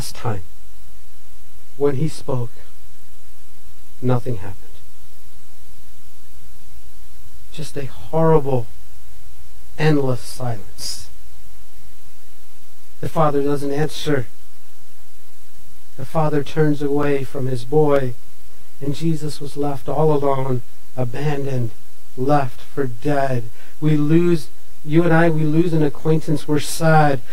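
Clock slip clicks, 0.12 s to 27.32 s: a soft rattle of ticks roughly every 70 ms, likely single samples slipping between unsynchronised clocks about 300 ppm apart.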